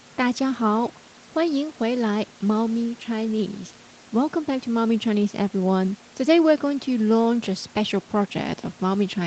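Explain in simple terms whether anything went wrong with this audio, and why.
Nothing went wrong with this audio; the speech was just carried over an ordinary call connection, which shapes it the way any call would.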